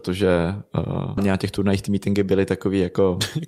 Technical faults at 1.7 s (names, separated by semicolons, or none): jitter buffer speed-up